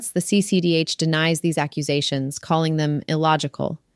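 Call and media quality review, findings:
Nothing stood out on listening to the speech in this clip.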